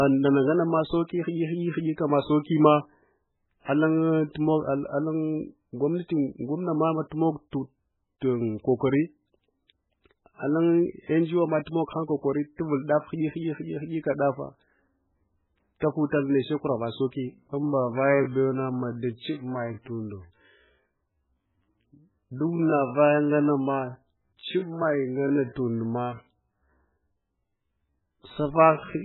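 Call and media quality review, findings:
Throughout: heavy codec damage. Watery, swirly texture, sibilants chirpy and metallic, attacks smeared. Likely cause: MP3 compression at a very low bitrate, consistent with around 8 kbps. The encoder is starved of bits, so it cuts the top band and drops weak spectral lines that blink on and off frame to frame. Spectrogram: hard treble ceiling, patchy speckled holes below it.

15.80–15.82 s: short hiss leading a sharp attack, attack itself soft. Pre-echo from the transform codec. Quantisation noise sized for the loud onset is spread across the whole block, including the quiet stretch just before the onset. Waveform: a low noise smear about 21 ms ahead of the transient. Spectrogram: a broadband haze directly before the onset column.

17.28 s to end: abrupt drop in pace with pitch held. Time-stretched section, likely software slowing to about 0.62x speed by repeating short segments to lengthen the audio while keeping pitch. 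Spectrogram: formant and harmonic spacing unchanged, events drawn out horizontally. Waveform: a sudden stretch in timing from 17.28 s.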